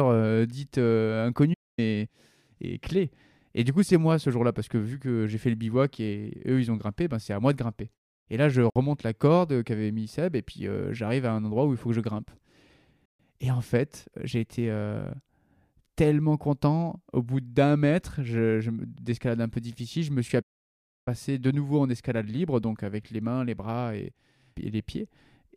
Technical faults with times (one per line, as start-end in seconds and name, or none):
1.53-1.79 playback stall
8.70-8.76 Bluetooth stall
13.05-13.20 Bluetooth stall
20.41-21.08 playback stall